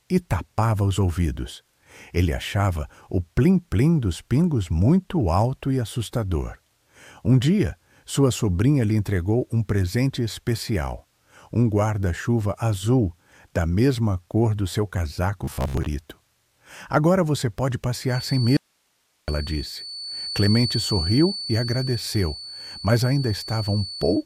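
From 15.44 to 15.88 s the sound turns to a rigid 66.7 Hz buzz, robotic sound from repeated short buffers, likely from roughly 15 ms repeats replacing about half the audio. Unlike a steady tone, it tracks the sound's contour.

At 18.03 s a thin 4.5 kHz feedback whistle enters, about 10 dB below the signal, and lasts to the end. It swells and fades slowly, likely from a loop held just short of runaway.

From 18.57 to 19.28 s an audio dropout to a faint residue cuts the sound abruptly for 0.71 s, likely from lost signal with a live path, leaving only hiss about 45 dB down, not a natural pause.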